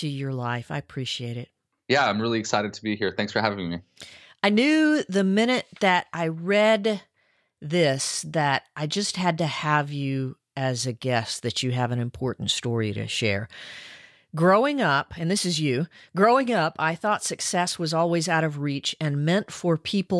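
No technical faults can be heard at any point in the audio.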